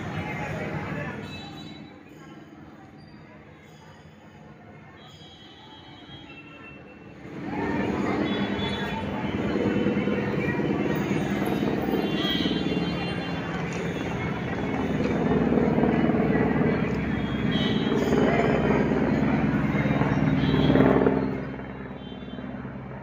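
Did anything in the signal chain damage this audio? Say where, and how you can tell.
Yes. Zipper noise from an unsmoothed gain stage at buffer level ticks through a rise of about 15 dB from 7.06 to 7.71 s and a fall of about 15 dB from 20.71 to 21.83 s. The gain moves in 2 dB and then 1 dB jumps, about ten a second, and each jump clicks.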